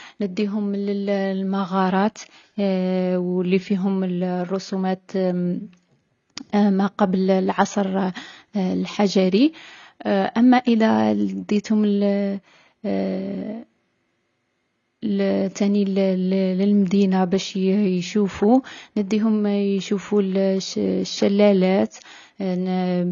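From start to finish the speech sounds dull and smeared, with nothing above about 6.9 kHz and a watery, fizzy texture clinging to sibilants and held vowels. This is likely AAC compression. The AAC-LC encoder, starved of bits, drops the top of the spectrum and coarsely quantises what remains, leaving gaps between frequency bands. The damage is plainly audible and fits a low bitrate around 24 kbps.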